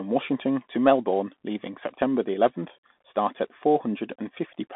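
The whole speech clip runs through a Bluetooth CVSD headset codec, squeezed into roughly 200 Hz to 3.6 kHz, with scratchy sibilants and grainy hiss from its one-bit slope tracking.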